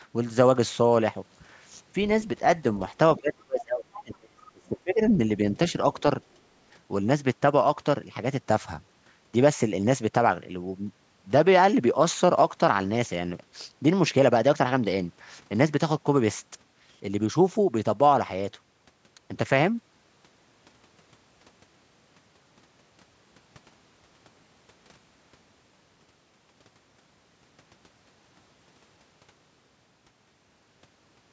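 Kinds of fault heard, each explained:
Speech suppressed in double talk: Between 3.17 and 5.02 s the talker's speech sinks by roughly 30 dB in pieces. Likely an echo canceller muting both overlapping voices.
Other side's voice leaking through: From 3.93 to 4.03 s a brief scrap of a second voice appears, about 20 dB below the speech. This is likely residual loudspeaker echo.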